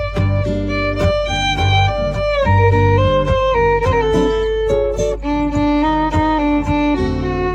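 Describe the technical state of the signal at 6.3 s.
At 6.3 s the signal carries mains hum, present throughout the clip: a steady 50 Hz tone with low harmonics, coupled in from the power line through a ground loop or nearby transformer. It sits prominently, roughly 10 dB below the wanted signal.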